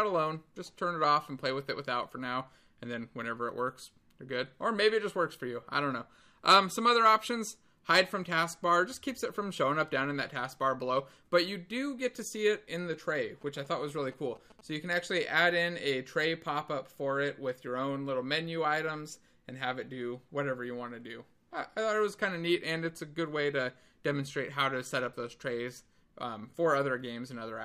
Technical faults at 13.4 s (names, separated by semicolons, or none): GSM signalling bursts